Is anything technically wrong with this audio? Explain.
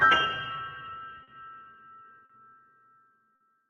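Yes. Small timing hiccups recur at uneven intervals throughout, from clock drift between sender and receiver: the sender's clock runs slow by roughly four percent, so the jitter buffer keeps draining and the receiver patches the gaps.

At 1.23–1.29 s, 2.25–2.31 s and 3.35–3.42 s the sound briefly hangs, held for 40, 40 and 50 ms. Each is a short stall from a late packet: the buffer ran empty, the last sound was stretched, then playback resumed with nothing lost. This all comes through a call codec whose top end stops near 12 kHz.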